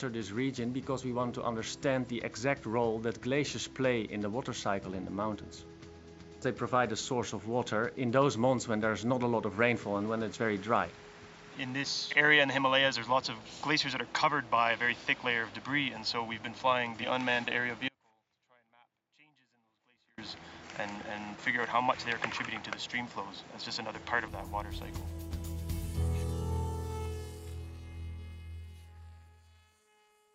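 From the start up to 24.28 s the sound is dull and boxy, with nothing above about 7.6 kHz and a background noise sitting roughly 30 dB under the signal. At 24.28 s it opens out with no gap and shifts in level by around 5 dB. That's the signature of an input switched to a poorer device: the recording likely began on a narrower-band microphone or headset profile and then moved to the better input.

Inside that stretch, from 17.89 to 20.18 s, the signal drops out for about 2.3 s. It doesn't fade or pause naturally. It cuts off abruptly, and what's left is only a faint trace roughly 35 dB below the normal level before it snaps back. That's an audio dropout to a faint residue, likely the source going missing while the path after it stayed live and carried a little leakage.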